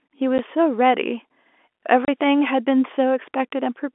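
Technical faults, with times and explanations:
0.38 s, packet loss filled with silence: a brief 10 ms dropout with hard edges. A single lost packet was likely replaced by digital silence.
2.05–2.08 s, packet loss filled with silence: a longer 30 ms hole in the telephone-band speech, with hard edges, which fits three consecutive packets going missing and being played as silence.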